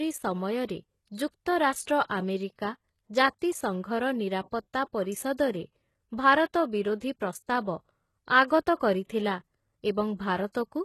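Speech with plainly audible HE-AAC compression throughout, likely: treble up to about 12.3 kHz sounds rebuilt, gritty and lispy rather than simply dulled, which fits a very low bitrate around 16 kbps. Pre-echo smears attacks with a short hiss before onsets, not after like reverb, at 1.15–1.18, 1.83–1.87, 2.04–2.10 and 8.76–8.81 s.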